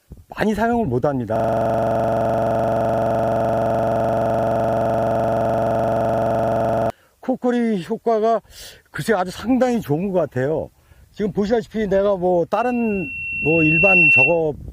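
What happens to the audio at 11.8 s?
Nothing goes wrong at 11.8 s; the audio there plays through intact, with no dropout, click, distortion or other fault.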